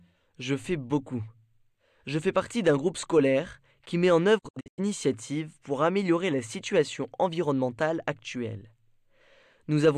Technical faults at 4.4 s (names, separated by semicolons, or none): digital broadcast dropout